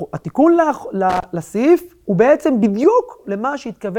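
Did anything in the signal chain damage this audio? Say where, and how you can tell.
Yes. A worn or dirty contact in the analogue wiring was briefly making and breaking from about 1.10 to 1.24 s. That loose connector crackle chops the speech on and off, heard as an irregular scratchy burst lasting roughly 0.15 s.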